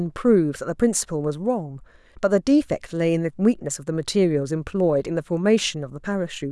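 Nothing stood out on listening to the speech in this recording.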